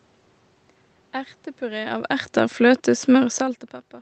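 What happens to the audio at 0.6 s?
At 0.6 s the speech passes through intact, with only the room noise and the ordinary coding character of the call path beneath it.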